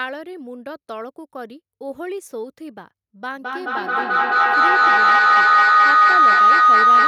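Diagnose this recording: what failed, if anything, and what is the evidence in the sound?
A feedback howl begins at 3.33 s and continues to the end of the recording. The failure sits in the acoustic path around call processing: a microphone is picking up a loudspeaker playing the same call, and each trip round that loop returns more level than it started with. Instead of decaying, the repeats grow and narrow into a tone around 1.5 kHz, pulsing roughly every fifth of a second, and peak at about 16 dB above the speech.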